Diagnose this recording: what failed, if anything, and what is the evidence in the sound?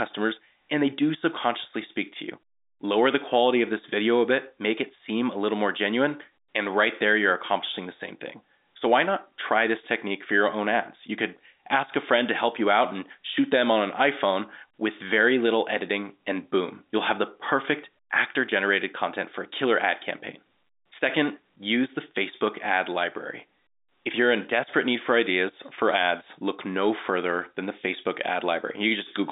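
No fault found.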